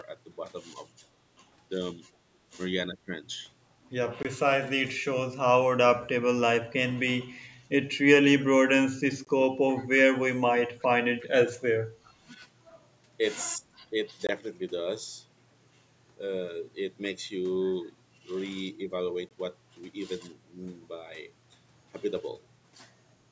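At 2.13 to 2.17 s and again at 2.93 to 3.12 s the talker dips sharply, by roughly 10 and then 20 dB, the likely result of speech suppressed in double talk. The echo canceller ducks the near voice while the far side speaks.

20 ms holes sit at 4.23 to 4.25 s and 9.25 to 9.27 s, a gap between chunks every 5 s. Their strict regularity marks them as joins between chunks, not suppression.

From 9.77 to 9.85 s, 10.79 to 10.87 s, 11.21 to 11.27 s and 12.05 to 12.09 s, faint scraps of voice return about 30 to 35 dB down, each trailing the original by a steady 366 ms. This is likely echo leak: loudspeaker sound passing the canceller. The fixed delay separates it from reverberation.

Suppression returns at 13.6 to 13.95 s, with a deep drop of around 25 dB. Further chunk gaps land at 14.27 to 14.29 s and 19.29 to 19.31 s, and the whole band stops near 8 kHz, as usual for call microphone processing.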